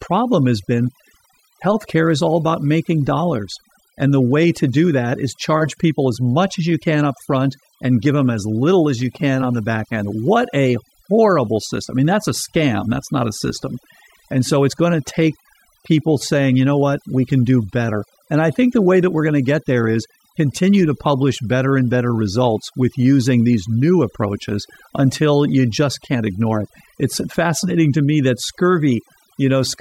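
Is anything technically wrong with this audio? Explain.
Yes. Overdone noise removal runs throughout the speech. A noise reducer set too aggressively pulls individual frequency bands down or out whenever they resemble its noise estimate, taking quieter vocal detail with them, so the background drops and breaks up into twinkling specks.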